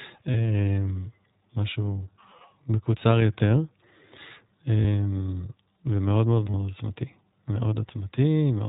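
iLBC codec damage runs through the whole speech recording: nothing above 4 kHz survives, and the voice sounds rough and synthetic, which fits iLBC's 20 ms narrowband mode. Lost iLBC frames at 0.33–0.35 s, 4.80–4.85 s and 6.50–6.55 s, about 20, 40 and 40 ms long, leave short held, buzzy vowel-like sounds where the decoder repeated the last pitch cycle with noise, and the voice recovers almost at once.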